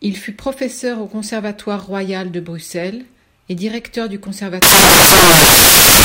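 Samples built from the wrong bytes, from 4.62 s to the end: misassembled bytes turn each sample's low bits into loud, harsh broadband noise.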